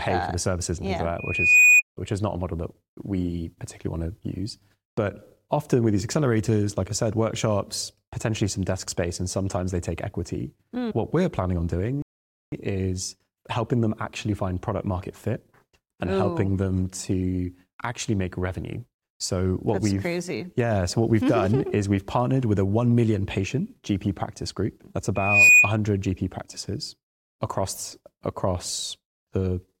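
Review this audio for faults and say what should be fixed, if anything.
Two loudspeaker feedback squeals need fixing. The first runs from 1.18 to 1.82 s, just before "which is not a", and the second from 25.15 to 25.75 s. Both are a single 2.5 kHz tone that swells over a few tenths of a second until it sits roughly 10 and then 15 dB above the speech. The mic is picking up the speaker it feeds, and at 2.5 kHz the loop gain tips past one, so that frequency keeps feeding itself. To prevent it, pull the mic back from the speaker or drop a narrow notch at 2.5 kHz on that channel.

There's also a playback stall from 12.02 to 12.52 s. The audio just goes silent for 0.5 s between "we're planning on doing" and "is helping them actually", then carries on. It sounds like the player likely ran dry of buffered data, or its thread got blocked, and it simply waited until it could resume. To prevent it, give the player a bigger buffer and keep its audio thread clear of other work.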